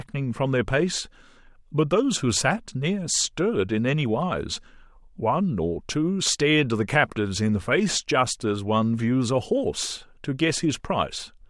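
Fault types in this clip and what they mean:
No faults are audible anywhere in the speech.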